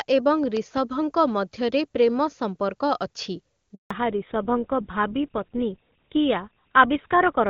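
A voltage pulse, likely from a plug, switch or static discharge, hits the line between 0.57 and 0.79 s, just before "ମଧ୍ୟରେ ପ୍ରେମ ସମ୍ପର୍କ ଅଛି". It comes through as a loud pop, two sharp thumps in quick succession, peaking somewhat above the speech level while the speech continues underneath.

Right after "ମଧ୍ୟରେ ପ୍ରେମ ସମ୍ପର୍କ ଅଛି", the call switches networks and no speech frames arrive from 3.75 to 3.91 s. This handover gap leaves 160 ms of silence as the voice fades out abruptly, and whatever was said in that stretch is lost.

The new link no longer carries HD Voice. From 3.91 s to the end the call falls back to narrowband, and the sound suggests a GSM full-rate codec replacing wideband AMR. Nothing above 4 kHz survives, so the speech turns duller and rougher than the crisp opening section.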